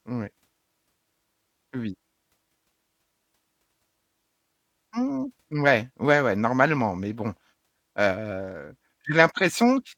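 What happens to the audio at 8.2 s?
Nothing goes wrong at 8.2 s; the audio plays through that moment intact, with no audible fault.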